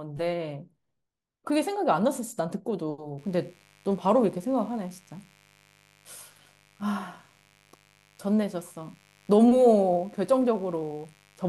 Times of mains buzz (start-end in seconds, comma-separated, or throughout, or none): 3.18-11.49